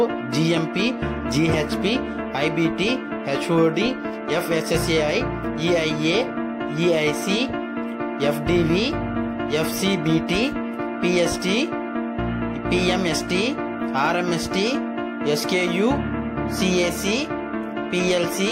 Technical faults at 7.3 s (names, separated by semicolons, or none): none